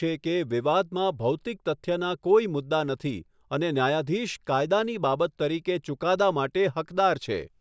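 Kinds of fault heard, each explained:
No technical faults can be heard in this speech recording.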